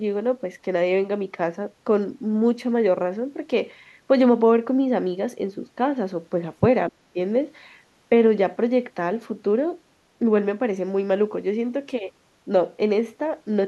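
A speech clip in which, from 6.89 to 7.18 s, the talker's level plunges by around 40 dB for roughly a third of a second. This is speech suppressed in double talk, likely an echo canceller turning down the talker along with the loudspeaker echo. It shows as a sudden gap in the waveform and a near-empty spectrogram column.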